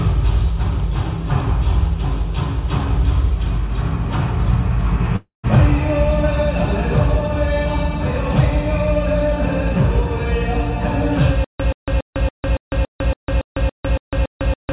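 At 5.16 s the audio breaks off for about 0.3 s, to 5.45 s, in what sounds like a long network dropout. For roughly 0.27 s the last sound is carried on as a fading synthetic buzz, with a stretch of about 140 ms of near-silence. When the audio resumes, about 280 ms of material has simply gone missing. This is likely packet loss that the receiver's concealment could only paper over briefly.

From 11.44 s to the end, the audio turns into a stutter with silent gaps. A fragment of about 128 ms repeats, followed each time by roughly 153 ms of dead digital silence. The cycle recurs steadily every 281 ms until the clip stops, and no new material gets through. The likely cause is a stalled stream replaying its last buffer on each retry before running empty. Throughout, the band stops at 4 kHz, which fits a G.711 mu-law call path.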